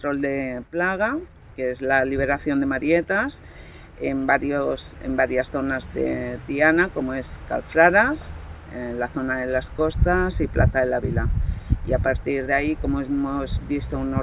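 No technical faults can be heard anywhere in the audio. Nothing in it stands out as a problem at any point.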